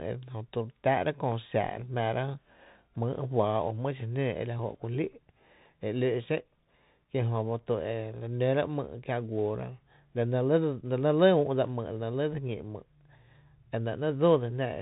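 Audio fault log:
Throughout, Bluetooth CVSD headset codec: the speech sounds muffled and boxed-in, with nothing above 3.8 kHz, scratchy s sounds and a grainy hiss underneath. A one-bit delta coder tracks the waveform with an adapting step, as on a 64 kbps CVSD link, and loud bright sounds outrun it.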